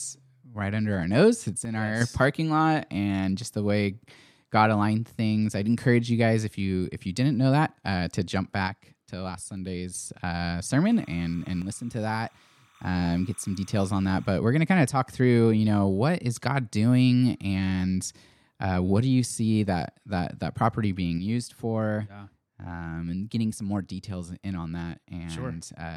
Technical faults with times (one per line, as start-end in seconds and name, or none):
1.65-2.01 one channel drops out
8.68-9.94 one channel drops out
10.85-14.36 timecode bleed
11.62-12.75 one channel drops out
21.18-25.97 one channel drops out